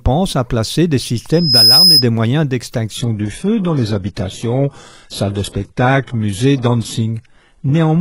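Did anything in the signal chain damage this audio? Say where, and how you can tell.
Yes. Loudspeaker feedback squeal damages the capture path, in the acoustic loop between microphone and loudspeaker. Just after "à placer des", a pure tone near 5.1 kHz appears at 1.33 s. It swells over roughly a third of a second and peaks around 10 dB above the speech. It stops at 2.06 s. One frequency growing on its own means the loop gain exceeded one there. The tone kept feeding itself until the amplifier limited it or the loop was broken.

The second fault sits at the network and codec stage: the adaptive stream dropped to a lower bitrate. At 2.96 s the quality falls abruptly, with no gap, and stays low to the end. Nothing remains above 11.5 kHz. The treble turns thin, and codec artefacts rise. This points to a switch from an AAC-LC 96 kbit/s encoding to a very low-bitrate HE-AAC version, likely triggered by a slower connection.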